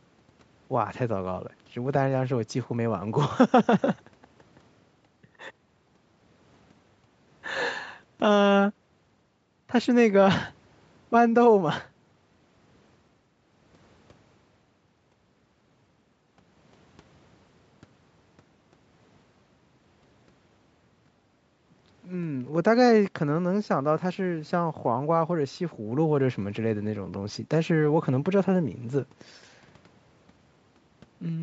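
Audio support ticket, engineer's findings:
Nothing to flag on this speech recording: it has the usual call-path character, with content stopping around 8 kHz as expected for the mic processing and call codec, and no dropouts, glitches or level problems to chase.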